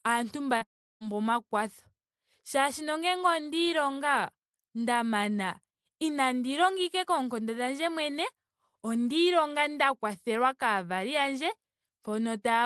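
Speech over a call line, and right near the start, from 0.57 to 0.63 s, there's a short concealed packet loss: about 40 ms never arrived, so the receiver stretched the preceding sound to cover the gap, which comes across as a quick smear before the real audio blends back in. It runs straight into a longer hole from 0.63 to 1.03 s. There's a short fading continuation of the last sound, then roughly 340 ms of silence, and the speech picks up again with that stretch simply gone, which is most likely a long network dropout that cost about 380 ms of audio. The band tops out around 12 kHz, as you'd expect from the Opus call path.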